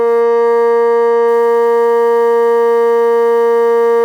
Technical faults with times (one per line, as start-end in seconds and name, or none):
1.28-4.04 sample clock jitter